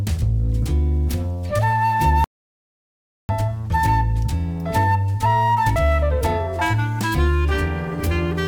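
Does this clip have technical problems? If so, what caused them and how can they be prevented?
Yes. An audio dropout to silence runs from 2.24 s to 3.29 s: the sound stops dead mid-flow and about 1.05 s is replaced by silence, with no room tone underneath, before it resumes just as abruptly. This is likely a momentary loss of the input signal, such as a loose cable, a failing wireless link or a brief mute, while the recorder kept writing zeros. Securing connections, monitoring levels during capture and avoiding unstable links prevents it.

Damaged data in a compressed stream shows up at 5.76 s as a short, harsh blip that does not belong to the surrounding sound. Some bytes in the encoded file were corrupted there, so the decoder misread that frame, lost its place and had to resynchronise on the next valid frame header, producing a burst of garbage instead of the intended audio. Verifying transfers with checksums and storing or streaming over error-checked channels prevents it.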